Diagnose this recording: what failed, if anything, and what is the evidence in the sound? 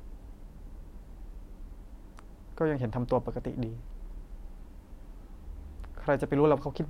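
Nothing failed: the speech signal holds steady throughout, with no breaks, level jumps, distortion or timing disturbances anywhere in the chain from capture to playback.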